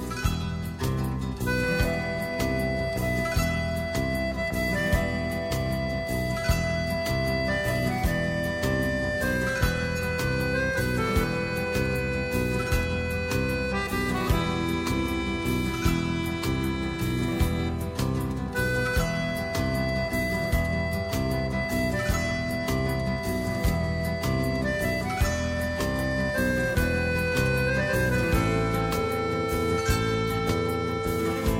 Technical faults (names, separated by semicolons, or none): none